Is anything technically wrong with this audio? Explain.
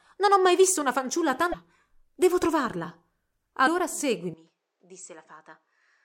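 Yes, there are a couple of problems. At 1.50–1.54 s, right after "mai visto una fanciulla", and again at 3.64–3.68 s, there's damaged data in the compressed stream. The decoder chokes on bad frames, loses sync and jumps ahead, leaving a brief glitch each time.

From 4.34 s to the end, the speech abruptly turns duller and drops roughly 10 dB with no gap. Nothing above 8.7 kHz remains, and a new noise floor sits well below the speech. That sounds like the input likely switched to a poorer device.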